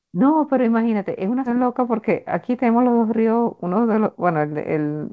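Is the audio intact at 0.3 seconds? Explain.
Yes, the audio is intact at 0.3 seconds: the speech there passes through the call path with its usual G.722 coding, which leaves nothing above 8 kHz, and no fault occurs at that moment.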